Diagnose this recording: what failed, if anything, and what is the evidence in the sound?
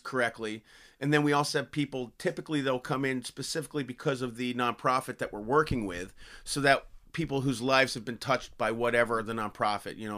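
Listening through this speech recording, nothing stood out as a failure at any stage of the chain.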